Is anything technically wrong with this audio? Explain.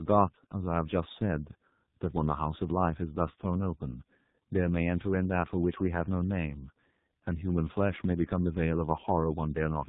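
Yes. Tandem speech coding affects the whole clip. The speech has passed through two low-rate speech codecs in a row, with a plain telephone link between them. The sound points to AMR-NB at about 10.2 kbit/s, then G.711 mu-law, then G.723.1 at about 6.3 kbit/s. Each speech coder rebuilt the damaged output of the one before, so their errors stacked up. Nothing remains above 3.8 kHz. The speech sounds muffled, rough and warbly throughout.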